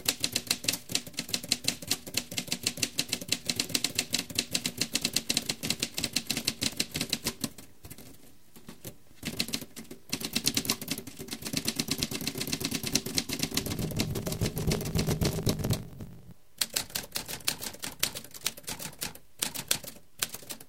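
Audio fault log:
4.83 s to the end, block size mismatch (truncated): a steady 50 Hz buzz sets in and the sound runs about 1.16 times faster while keeping roughly its normal pitch. One stage writes blocks that are longer than the next stage reads, which fits 1024-sample blocks being written, so the tail of each block is discarded. The repeated cut at every block boundary produces the 50 Hz buzz, and the dropped material shortens playback, giving the speed-up.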